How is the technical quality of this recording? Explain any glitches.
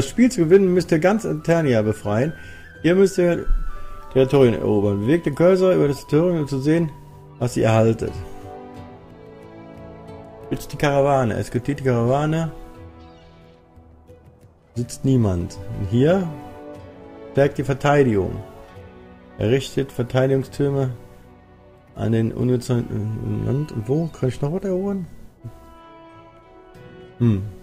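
Nothing stood out as a technical problem on listening, so there are no glitches to explain.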